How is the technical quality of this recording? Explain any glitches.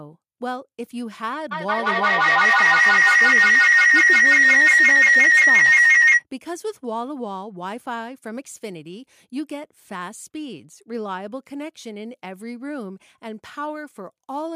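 The recording has one serious glitch, a feedback howl from 1.51 to 6.25 s. A microphone was picking up a loudspeaker carrying the same call, and each trip around the loop added gain. A shrill tone near 2 kHz builds until it sits about 14 dB above the speech, with the loop repeating roughly every 150 ms.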